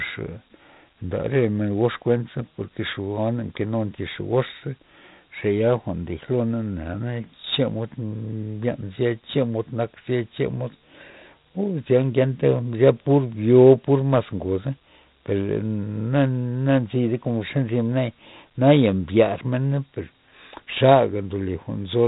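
Speech that sounds gritty and muffled from start to finish, with a coarse hiss riding on every louder syllable and harsh edges on sharp consonant attacks. Nothing reaches above 3.8 kHz. The cause is heavy 4-bit ADPCM compression: each sample is coded as a small step from a prediction, so the error rises and falls with the speech, and the step size lags behind sudden attacks. The 32 kbps rate fits an 8 kHz sample rate, which explains the dull top end.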